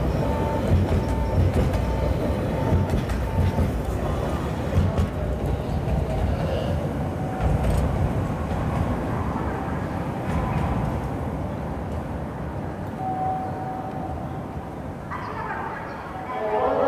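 Nothing in the audio stood out as a technical problem on listening.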